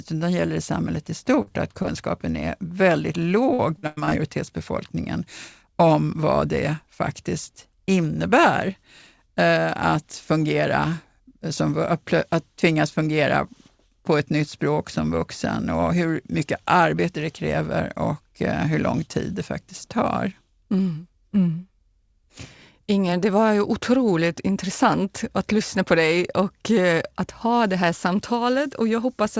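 Short concealed packet loss hits at 1.42 to 1.48 s, just after "gäller i samhället i", then twice back to back at 1.82 to 1.86 s and 1.86 to 1.90 s, ending right before "är väldigt". About 40 ms of audio went missing in the first hole and about 20 ms in each of the later two. Each time the receiver patched the hole by extending the preceding speech, so these spots come across as a quick smear or wobble, with a brief sound possibly swallowed.

Repeated packet loss, giving a robotic sound, follows from 3.54 to 4.13 s, right after "är väldigt". Within this roughly 0.6 s stretch the stream dropped out again and again, in what sound like five separate holes totalling about 240 ms, the longest about 100 ms. That leaves around 40% of the span synthesized. Each patch is overtaken by the next hole before the real signal settles, giving choppy speech with pieces missing. Across the clip the call path's band limit is present, with nothing above 8 kHz, which fits a G.722 wideband codec.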